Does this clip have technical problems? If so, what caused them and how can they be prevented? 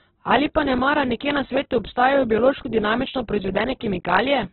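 Yes. Throughout the clip the speech was likely squeezed through Opus compression at a very low rate, with the encoder in its music-oriented mode: there are too few bits to code each band properly, so the encoder fills them with folded or noise-like content instead of leaving them empty. The audio is therefore grainy and rough rather than swirly, and the bandwidth has shrunk to narrowband, with nothing above 4.2 kHz. This heavy damage fits a setting of around 8 kbps. To prevent it, encode speech at 24 kbps or more, or allow the encoder's speech mode at low rates.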